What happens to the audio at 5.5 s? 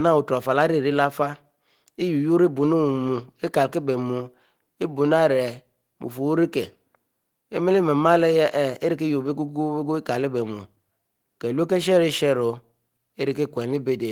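Nothing goes wrong at 5.5 s; the speech carries on intact through that moment with no audible fault.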